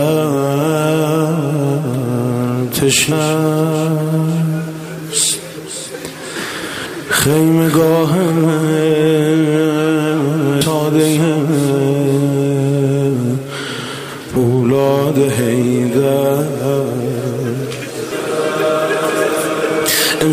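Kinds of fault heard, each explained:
audio missing between chunks: The recording likely ran in 4-second chunks and dropped about a third of a second at each handover, so the sound jumps abruptly forward, joined with no silence, at 6.86, 10.61 and 14.36 s, evenly spaced 3.75 s apart.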